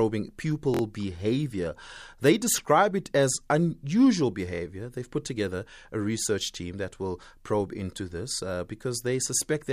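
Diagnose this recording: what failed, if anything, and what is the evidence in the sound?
The buffer stage ran late, producing a repeated buffer: from 0.74 to 0.81 s one 23 ms piece stutters four times, which fits a 1024-sample buffer.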